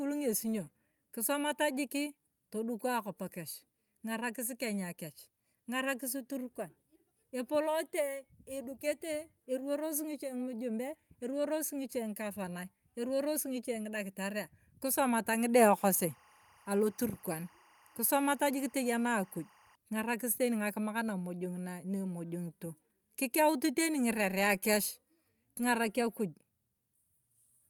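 Linear timecode running at 23.976 frames per second leaked into the speech path from 15.78 to 19.75 s. This timecode bleed adds a square-wave code flipping between tones near 1 and 2 kHz, heard as a chirping warble roughly 30 dB below the voice.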